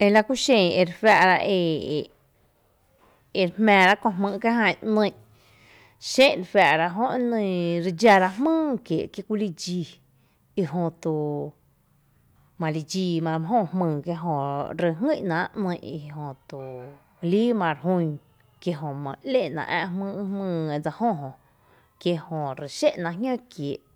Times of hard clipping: 0.02-1.32, 3.68-3.92, 6.20-6.74, 8.05-8.17

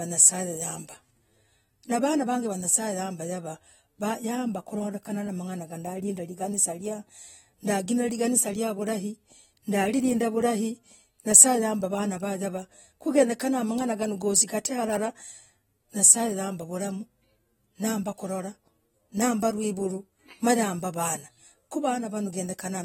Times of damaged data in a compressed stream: none

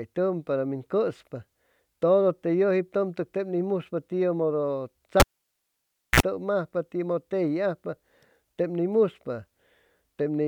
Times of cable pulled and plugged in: 5.20-6.20

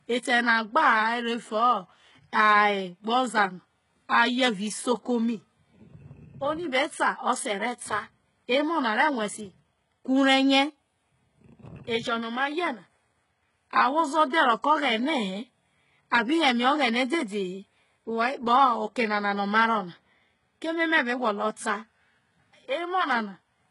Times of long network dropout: none

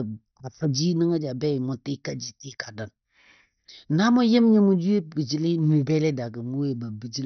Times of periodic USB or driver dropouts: none

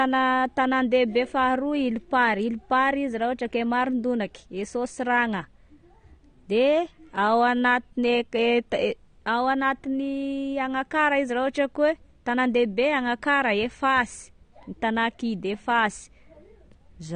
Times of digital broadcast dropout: none

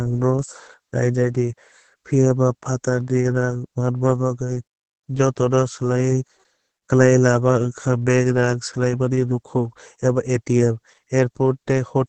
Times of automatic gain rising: none

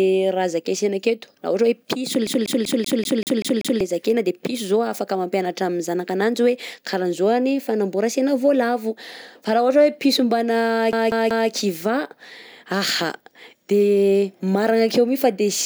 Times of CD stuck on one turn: 2.27-3.81, 10.92-11.50

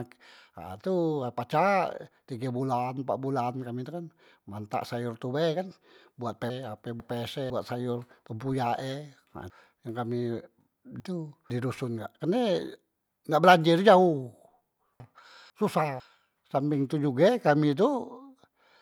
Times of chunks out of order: 6.50-7.50, 9.50-11.50, 15.00-16.00

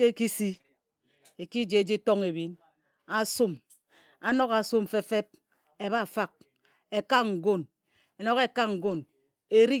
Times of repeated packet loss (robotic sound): 0.53-0.70

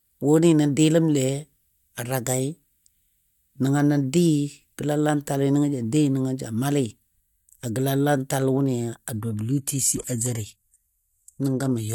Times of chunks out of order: none

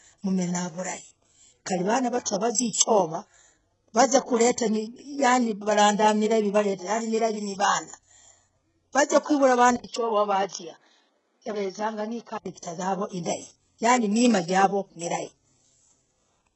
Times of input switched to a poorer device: 9.76-12.46

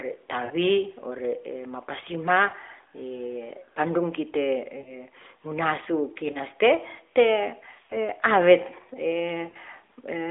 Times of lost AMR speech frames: 0.46-0.54, 2.50-2.55, 4.78-4.95, 6.32-6.37, 7.86-7.96, 9.50-9.56

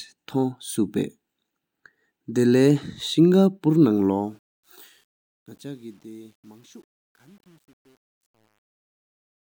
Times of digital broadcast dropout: none

